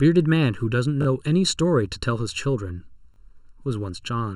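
Channel delay (comb filtering) runs throughout the speech: one channel arrives under a millisecond late, so the mono sum cancels evenly spaced frequencies from around 700 Hz upward, sounding hollow and phasey. A repeated buffer at 1.02 to 1.06 s and again at 3.14 to 3.18 s plays the same 20 ms slice twice more, which fits a 20 ms buffer, giving a brief stutter with hard joins.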